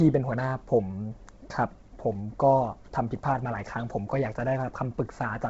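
Throughout the speech, the audio has likely passed through Bluetooth LC3 compression at a very low bitrate, which fits about 16 kbps in 10 ms frames. The damage is heavy. Nothing remains above 7.7 kHz, and the thinned upper band gives a breathy, grainy edge.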